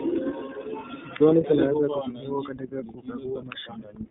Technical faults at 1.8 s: iLBC codec

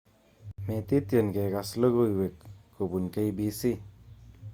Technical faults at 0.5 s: gap at a join of encoded pieces

